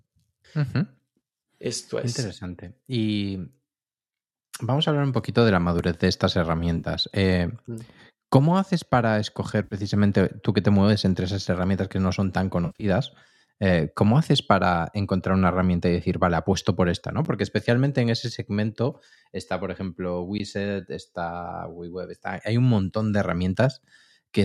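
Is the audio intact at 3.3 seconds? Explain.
Yes, the audio is intact at 3.3 seconds, with no fault to be heard at that moment.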